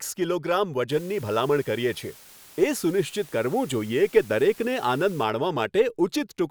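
Speech, with a steady, even hiss from 0.92 s to 5.24 s, sitting roughly 25 dB below the voice. The cause is low bit depth with dither: the signal is held to 7 bits, and random dither is added before rounding, so the rounding error turns into flat white noise. Without dither, the same reduction would give a gritty, signal-tracking distortion that comes and goes with level. Here the hiss stays constant, and the speech itself stays clean.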